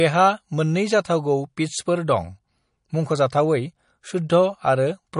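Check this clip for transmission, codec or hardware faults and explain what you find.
One codec fault runs through the whole speech clip. The sound is watery and swirly, with smeared consonant onsets and nothing above 10.5 kHz. This is likely MP3 compression at a low bitrate, around 40 kbps. Starved of bits, the encoder cuts the treble and drops weak frequency lines that flicker between frames.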